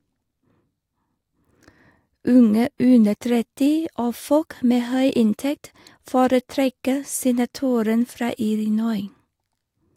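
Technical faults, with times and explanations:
Nothing here needs flagging: there are no dropouts, glitches or other technical faults to point to anywhere in this speech recording.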